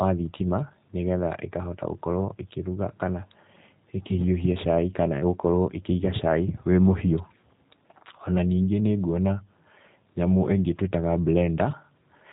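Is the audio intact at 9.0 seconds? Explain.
No. G.729 codec coding is present at 9.0 seconds, as it is across the whole clip. This codec models speech with a vocal tract filter and a pitch predictor, then keeps only four pulses per 5 ms half-frame as excitation. It passes nothing above 4 kHz, so the speech sounds muffled and slightly rough and synthetic, with plainly audible damage. This fits the 8 kbit/s G.729A variant.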